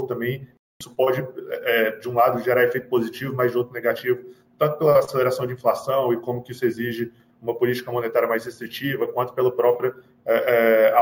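Imaging from sample-and-hold upsampling runs throughout. Samples were repeated without smoothing, which fits 16 kHz audio raised to 48 kHz. A mirrored copy of the spectrum fills 8 to 16 kHz about 22 dB down, heard as a metallic fizz that follows the level. A spectrogram shows it as an upside-down reflection of the lower band.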